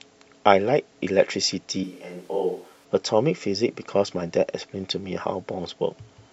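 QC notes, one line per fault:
1.84 to 2.85 s, switch to a distant microphone: the speech abruptly turns roomy and hollow, loses its low end, drops by around 10 dB and sits over a noise floor only about 30 dB below it, then snaps back just as suddenly. The likely cause is the close microphone's feed dropping out in favour of a farther one. A plain gain dip would keep the tone and closeness, and added reverb wouldn't thin the bass or raise the noise.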